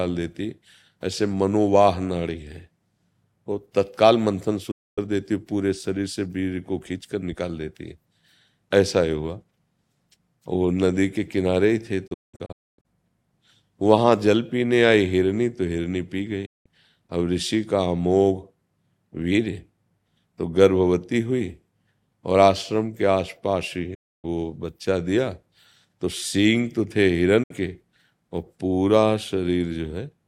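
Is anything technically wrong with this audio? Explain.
Yes. The speech has a digital broadcast dropout at five points: 4.71 to 4.98 s, 12.07 to 12.86 s, 16.46 to 16.66 s, 23.94 to 24.25 s, and 27.43 to 27.51 s. In each, the receiver has stopped getting decodable frames and mutes until valid ones return. The sound fades out over about 8 ms, leaving a hole of roughly 64 to 288 ms. At 12.07 s it breaks into several holes across about 0.77 s, the longest 256 ms. What was broadcast in those gaps is gone. On a waveform these appear as flat silent stretches with steep edges. A spectrogram shows them as clean vertical blank bands across all frequencies.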